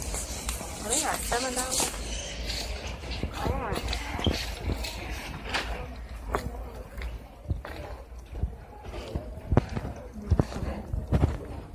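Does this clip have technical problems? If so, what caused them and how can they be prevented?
No, there are no technical problems to hear in this clip. With nothing at fault, there is no cause to trace and nothing to prevent.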